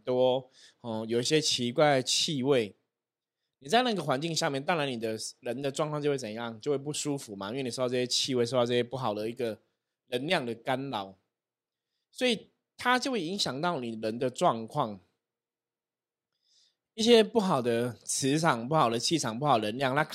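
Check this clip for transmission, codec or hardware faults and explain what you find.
Two corrupt frame decoded faults are present. At 1.32 to 1.37 s and at 5.08 s, damaged compressed frames were played anyway. Flipped bits gave wrong gains and codes, misplacing energy. Each is a brief chirp or noise burst, peaking around -30 dBFS.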